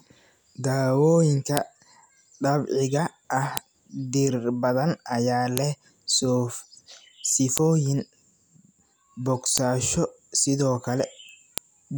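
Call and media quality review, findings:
Sharp clicks at 1.57, 3.57, 5.57, 7.58, 9.58, 11.58 s, every 2.0 s. File header played as audio: chunk joiner leaves WAV header bytes in the speech stream.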